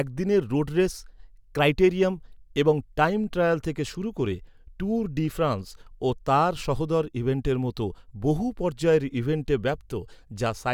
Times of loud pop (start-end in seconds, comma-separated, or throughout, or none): none